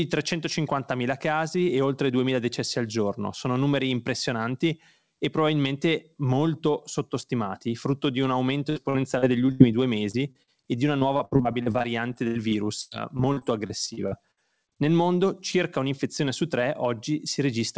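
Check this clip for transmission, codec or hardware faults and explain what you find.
Yes, there are transmission faults: a speech clip with packet loss in several places between about 8.7 s and 14.4 s. The audio has nothing above 8 kHz, which fits a wideband call codec such as G.722 at 64 kbps.

Repeated packet loss (robotic sound) runs from 8.70 to 9.61 s, just after "frutto di un aumento", and again from 10.99 to 14.39 s, following "e di una". Packets kept going missing, and each hole was patched by extending the previous sound. The first stretch has 5 gaps, about 0.23 s filled in total, the longest 77 ms, with 26% of the span concealed. The second has 21 gaps, about 0.7 s filled, the longest 100 ms, with 21% concealed. The result is choppy, robotic speech with pieces missing.

Short concealed packet loss occurs at 10.11 to 10.15 s, where 21 ms is filled for 20 ms lost, and at 10.31 to 10.37 s, where 33 ms is filled for 40 ms lost. 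The receiver continued the last sound across each hole and then blended back, leaving a brief smear or wobble.

A burst of packet loss occurs at 10.43 to 10.49 s, just before "e di una". About 46 ms was filled by continuing the previous sound while it faded out, and about 40 ms of real audio is missing. It is heard as a short held buzz or fading hiss, followed by a jump forward.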